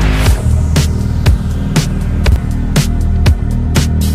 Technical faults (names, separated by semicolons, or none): chunks out of order